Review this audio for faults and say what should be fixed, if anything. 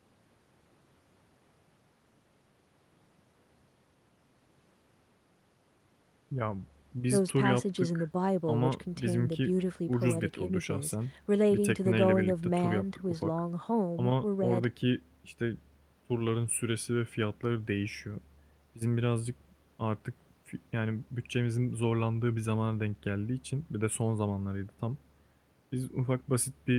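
Nothing stood out on listening to this speech recording, so there is nothing here that needs fixing.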